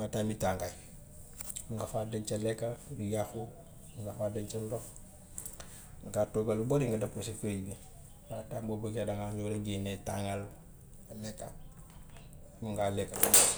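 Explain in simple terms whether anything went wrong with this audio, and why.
Nothing went wrong: the speech comes through without any audible technical fault from beginning to end.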